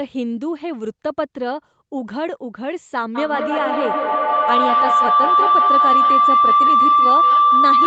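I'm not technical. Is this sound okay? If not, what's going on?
No. From about 3.15 s to the very end, a piercing tone near 1 kHz swells up and ends up louder than the speech, with the sound coming back around roughly every fifth of a second. This is feedback howl. Two devices in the same room are on the call, so one device's loudspeaker is picked up by the other's microphone, sent back, and played again, getting louder on each trip around that loop until it turns into a howl.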